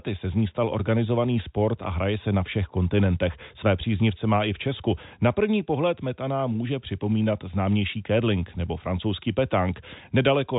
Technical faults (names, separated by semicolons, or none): none